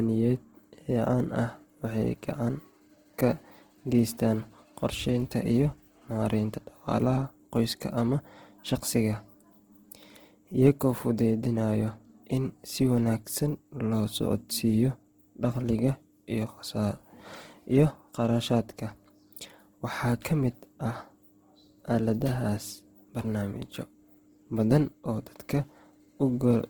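From start to finish the speech carries plainly audible Opus compression damage, likely from encoding in its music mode at a low rate near 16 kbps. Bands sound filled rather than emptied, so tones turn rough and grainy instead of swirling as MP3 would, and content still reaches about 20.3 kHz.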